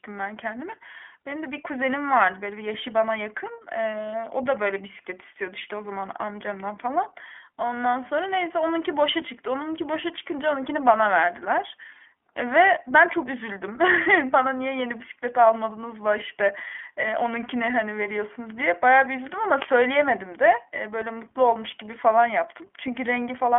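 Throughout, the speech sounds plainly rough and synthetic with nothing above 3.6 kHz, the mark of the iLBC codec coding each 20 ms frame independently.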